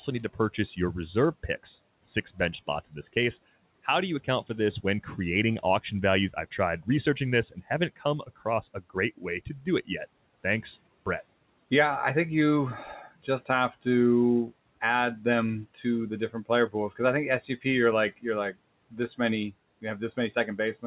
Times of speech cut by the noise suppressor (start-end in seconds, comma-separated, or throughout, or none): 9.46-9.67